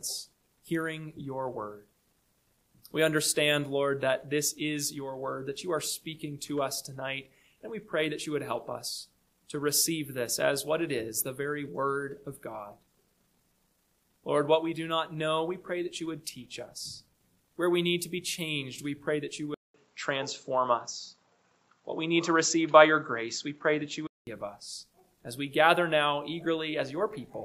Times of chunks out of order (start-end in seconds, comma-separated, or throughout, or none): none